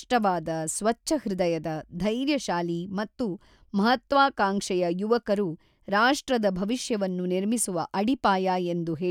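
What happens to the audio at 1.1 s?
Nothing goes wrong at 1.1 s: the speech carries on intact through that moment, with no dropout, click or distortion.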